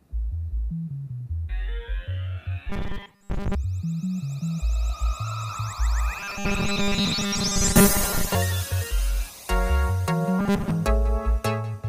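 Robotic sound from repeated short buffers appears at 2.70–3.55 s, 6.19–8.35 s and 10.39–10.71 s as a rigid 200 Hz metallic buzz. The likely cause is audio arriving too seldom, so a 5 ms slice is looped in place of most of the real sound.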